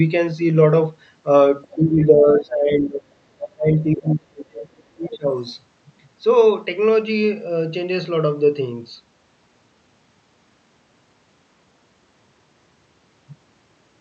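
A speech clip that came through a call link, with the Opus codec limiting it to about 8 kHz. The other side's voice leaking through appears as faint scraps at 1.65 to 1.75 s, 4.08 to 4.15 s and 5.03 to 5.17 s. The first sits about 30 dB below the talker. The later two are about 20 dB below. The likely cause is loudspeaker echo that the canceller failed to remove. Speech suppressed in double talk follows. From 1.76 to 3.06 s the talker's level dips by up to about 20 dB. From 3.35 to 5.33 s it drops harder, up to about 30 dB. Both sides were likely talking at once, so the canceller turned everything down.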